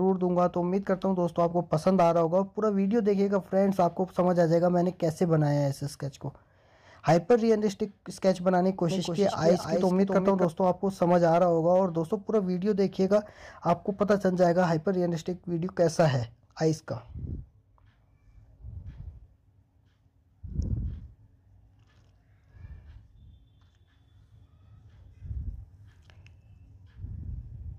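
A doubled audio track runs from 8.91 to 10.45 s. For that stretch a second, full-band copy of the sound trails the original by roughly 0.3 s, about 5 dB quieter, with no decay or room colour of its own. It cuts in and out abruptly at both ends. The likely cause is the signal being picked up a second time through a slower path, or an edit leaving two copies out of step.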